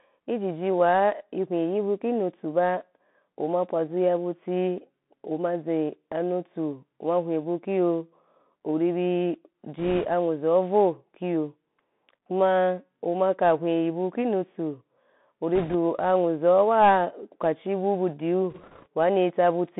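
Throughout, the speech is confined to roughly 150 Hz to 3.6 kHz, with scratchy s sounds, a granular hiss and distortion on loud high sounds. This is the Bluetooth CVSD headset codec. Its one-bit delta steps, consistent with a 64 kbps stream, cannot follow fast changes.

At 9.78 to 10.07 s, 15.55 to 15.75 s and 18.50 to 18.87 s, a rushing crackle rises over the speech without sharp clicks. These are bit errors on a Bluetooth voice link. A few percent of bits flipped, and each error's small effect fades quickly.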